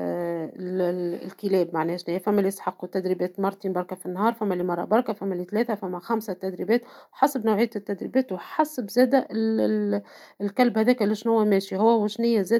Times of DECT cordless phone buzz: none

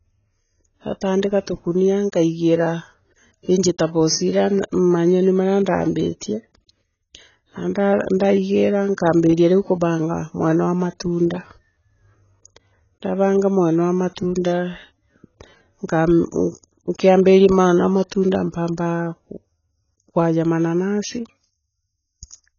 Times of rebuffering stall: none

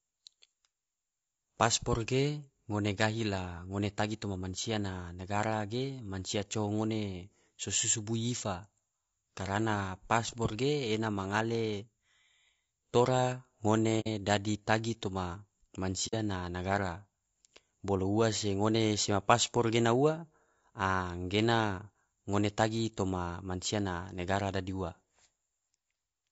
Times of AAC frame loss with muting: 14.00-14.07, 16.07-16.14

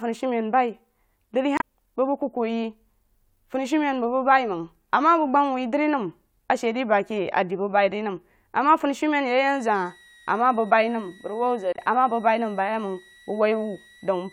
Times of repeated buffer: none

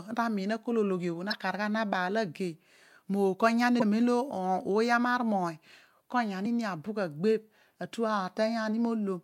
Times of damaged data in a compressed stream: 1.29-1.33, 3.78-3.82, 6.42-6.46

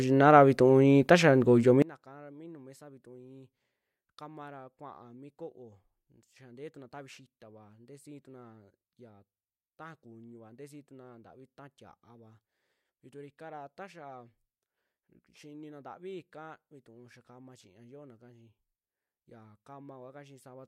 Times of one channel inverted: 1.82-20.68

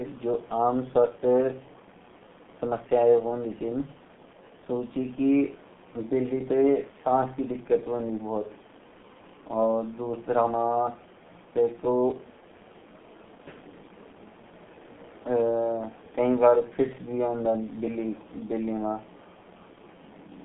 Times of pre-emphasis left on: none

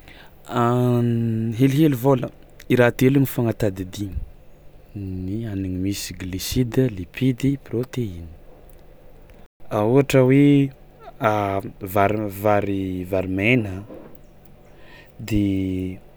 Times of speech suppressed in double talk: none

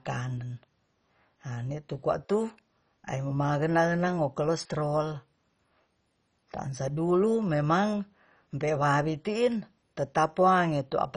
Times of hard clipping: none

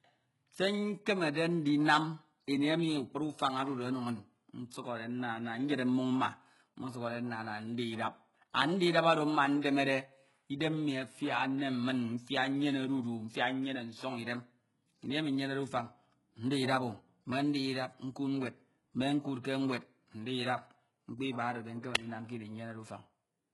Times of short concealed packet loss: none

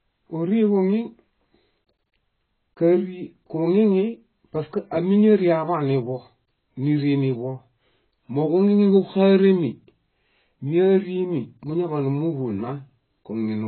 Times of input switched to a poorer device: none

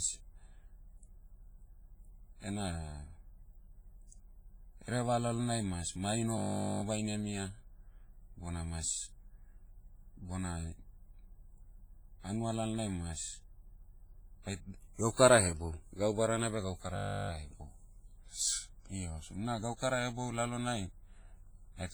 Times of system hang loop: 6.38-6.82, 16.96-17.30

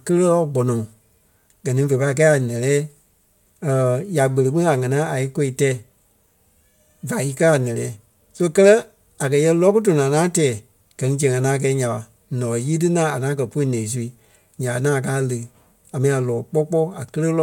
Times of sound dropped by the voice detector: none

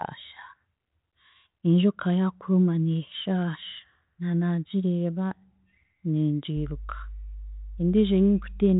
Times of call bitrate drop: none

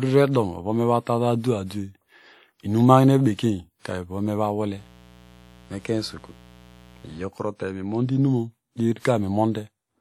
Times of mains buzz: 4.73-7.28

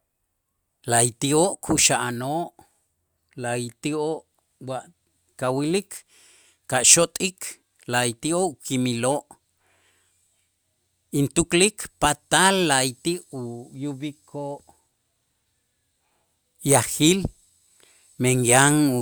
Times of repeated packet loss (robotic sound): none

